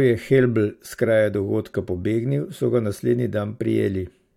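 A short speech recording with no audible technical fault anywhere in the signal.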